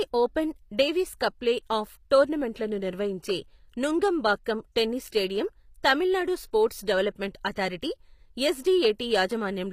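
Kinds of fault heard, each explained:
HE-AAC compression: The speech throughout sounds like it was likely coded this way, with audible damage. The upper spectrum seems rebuilt from copied lower bands rather than carried directly. Harmonics there fail to align with those below. Nothing reaches above about 15.5 kHz.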